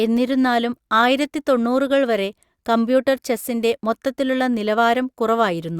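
Nothing faulty is audible anywhere in this speech recording.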